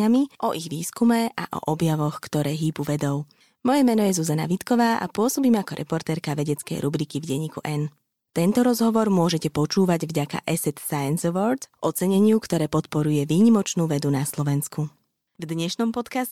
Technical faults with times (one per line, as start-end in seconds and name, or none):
none